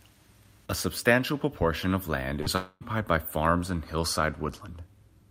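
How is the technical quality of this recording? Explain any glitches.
The recording has two connection glitches close together in the middle of the speech.

From 2.41 to 2.48 s, right after "substantial proportion of land", there's a burst of packet loss. A run of packets never arrived in time, so the receiver extended the last sound for about 47 ms and faded it, and roughly 40 ms of speech is gone. It's heard as a brief fading smear with a small jump forward. It's too short to die away into silence, which is what separates it from the next fault.

From 2.56 to 2.83 s, leading into "by farms and", the speech is replaced by about a quarter second of continued, decaying sound that thins to roughly 10 ms of silence before the speech resumes with about 240 ms missing. This is likely a long network dropout, where nothing arrived for long enough that concealment ran out. The fade all the way to silence and the much longer stretch distinguish it from the earlier burst.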